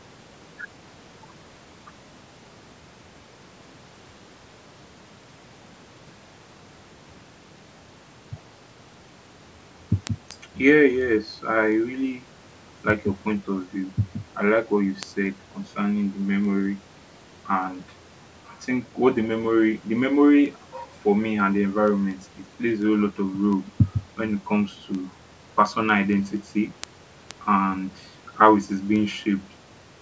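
From 0.16 s to 29.90 s the speech carries word clock ticks, about five per second, as a one-sample slip from a roughly 100 ppm clock mismatch; their steady rhythm separates them from random clicks.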